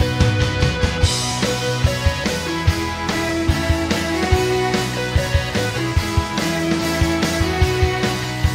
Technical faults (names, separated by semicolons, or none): audio missing between chunks